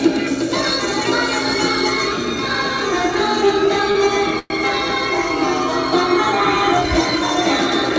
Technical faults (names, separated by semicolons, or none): short stall from a late packet; call audio freeze